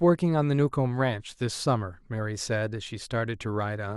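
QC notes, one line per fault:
No audible faults found on this speech clip; nothing to flag.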